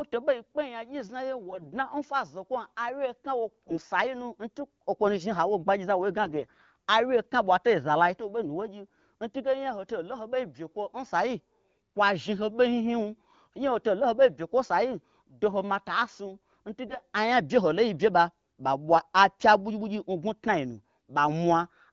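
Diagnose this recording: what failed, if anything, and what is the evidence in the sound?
The network link delivered AMR frames with bit errors, roughly 4–10% of weakly protected bits flipped, at 1.47–1.70 s (before "n fwa zokwom awye"), 3.68–3.86 s, 6.22–6.62 s and 16.86–16.96 s. Misplaced excitation pulses and skewed gain and spectral values make the speech hoarse, scratchy and gargly while pitch and level hold.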